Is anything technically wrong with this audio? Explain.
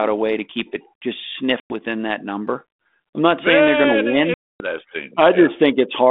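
Yes. The speech runs over a G.726 ADPCM link, which fits a 32 kbit/s line, with the band held to roughly 200 Hz to 3.6 kHz and only light codec hiss. It suffers packet loss on an ADPCM call twice, at 1.6 to 1.75 s and at 4.34 to 4.65 s. About 100 ms goes missing in the first gap, which sounds like a handful of packets, and about 260 ms in the second, nearer fifteen. The decoder fills each gap with silence, so the sound drops out with abrupt edges. Its adaptive predictor and step size then no longer match the sender's, so when the speech resumes it comes back slightly distorted, settling over some tens of milliseconds.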